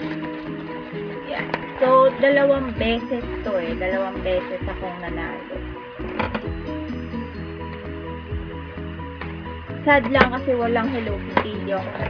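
Nothing in the recording stood out as a technical problem on listening.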